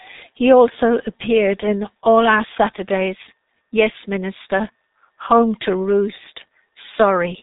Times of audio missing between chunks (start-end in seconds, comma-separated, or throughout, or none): none